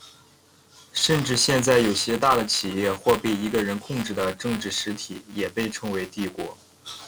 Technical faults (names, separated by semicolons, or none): buffer tearing